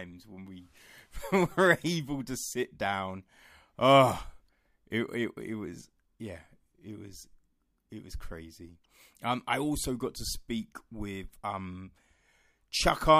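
Speech, with nothing technically wrong with it.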